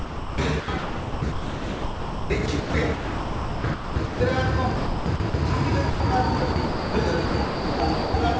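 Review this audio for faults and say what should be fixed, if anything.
From 0.0 to 4.2 s, 4.76 to 5.34 s, 6.38 to 6.94 s and 7.26 to 8.14 s the sound turns choppy. This is likely sound chopped by the voice detector: the sender repeatedly stopped transmitting and comfort noise filled about 3.1 s, 380 ms, 360 ms and 640 ms respectively.

At 5.90 to 6.00 s the sound drops out for 100 ms before returning. This is likely sound dropped by the voice detector, which judged that stretch to be background and stopped sending. The receiver played comfort noise instead.

To prevent both, lower the sender's voice-detector threshold and lengthen its hangover time, or disable discontinuous transmission for non-speech audio.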